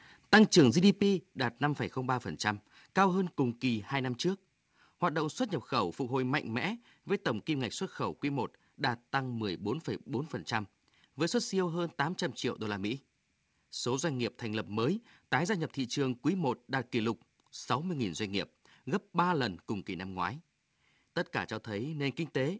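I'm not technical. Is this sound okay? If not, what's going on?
No. From 0.33 to 0.6 s the loudest moments turn harsh and crackly. This is microphone overload: the input was likely set too high, so the tops of the peaks were sliced off. Only a small share of the sound is affected.

At 1.02 s the microphone volume stepped down. Voice and background both become noticeably quieter all at once. The likely cause is the call software reacting to the distorted peak just before by lowering the microphone's input level in a single jump.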